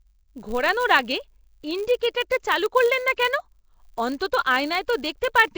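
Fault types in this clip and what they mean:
Nellymoser compression: The speech carries a rough, hissy halo and a smeared, underwater colour. This likely comes from the Flash-era Nellymoser Asao codec at a bitrate that fits 32 kbps. Unlike a plain low-pass, empty bands are refilled with noise.
Filter restarted on every block: A steady buzz at 100 Hz runs under the whole clip and rises and falls with the speech level. Each block begins from silence and starts with a small transient. This ties it to the signal, unlike mains hum, which stays constant.
Pre-echo: Brief hiss arrives just ahead of sharp attacks, at 2.00 s before "চালু করলেন না কেন", at 3.16 s after "চালু করলেন না", and at 4.19 s. It spreads about 14 to 17 ms and softens each onset. It sits only before attacks, unlike steady codec noise.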